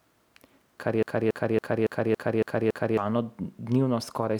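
At 1.03 s the speech gets stuck in a broken-record loop, repeating one 280 ms fragment seven times until 2.97 s, likely a stalled player resending its last buffer.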